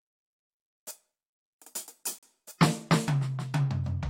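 At 2.18 s the music stops dead. A gap between stream segments opens there and lasts about 42 ms, until 2.23 s. The time stamps of two adjoining segments do not meet, so the player fills the space with silence. Both edges are hard, with no fade in or out. It sounds like a brief, clean dropout. The music resumes exactly where it left off, because nothing is missing. Only extra time has been inserted.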